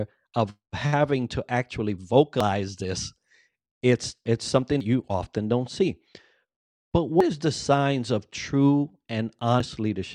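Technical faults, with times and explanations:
2.40, 4.80, 7.20 and 9.60 s: audio missing between chunks. The speech jumps forward at each of these points, with roughly a tenth of a second absent and the two sides butted together without any gap of silence. The skips recur at a steady interval of about 2.4 s, which points to the recording likely being handled in blocks of around 2.5 s, with a short stretch dropped each time one block is closed and the next begins.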